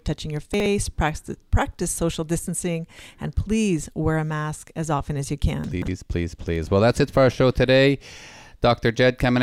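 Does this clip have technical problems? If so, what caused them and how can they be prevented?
Yes. Chunks out of order occur at 0.54–0.66 s after "touching your", with one 60 ms chunk playing one slot late, and at 5.64–5.88 s after "often as you can", with one arriving three chunks late. Unlike a dropout, nothing is missing. The audio is reshuffled, giving a jumbled moment with hard joins. Reordering chunks by sequence number in a jitter buffer before playback prevents this.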